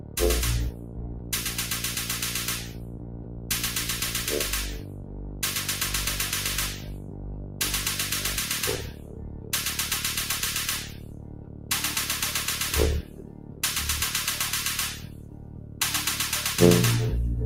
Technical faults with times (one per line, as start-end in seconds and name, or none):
0.00-17.45 noise suppressor applied to music or sounds
0.00-1.51 sound cut by the noise suppressor
2.58-3.50 sound cut by the noise suppressor
4.79-5.42 sound cut by the noise suppressor
6.73-7.60 sound cut by the noise suppressor
8.79-9.53 sound cut by the noise suppressor
10.83-11.70 sound cut by the noise suppressor
13.02-13.63 sound cut by the noise suppressor
14.95-15.80 sound cut by the noise suppressor